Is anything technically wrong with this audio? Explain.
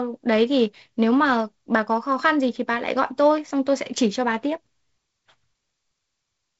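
No, nothing's wrong here; the speech just sounds like an ordinary G.722 wideband call at 48 kbit/s, with the slight hiss and the top end stopping around 7.7 kHz that you'd expect from that kind of line.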